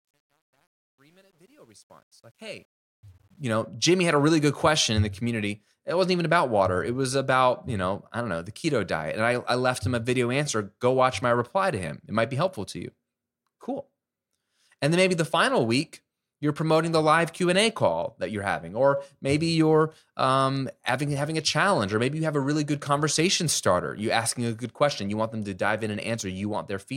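Truncation distortion on the fade-in runs from 0.0 to 3.61 s of this speech clip. The fade's gain stage keeps only about 10 bits with no dither. At the lowest levels the waveform collapses into a handful of coarse square steps, so the quietest stretch, 0.0 to 2.51 s, is the worst: gritty before it clears.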